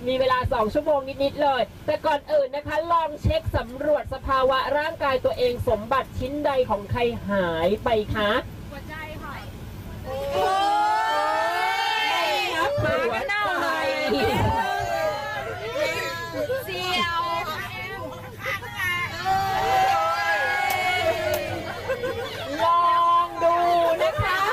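No technical faults can be heard anywhere in this audio.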